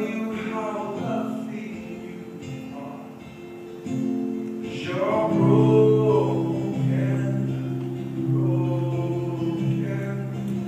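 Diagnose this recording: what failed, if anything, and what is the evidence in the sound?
Nothing failed, and the sound gives no evidence of a fault at any stage.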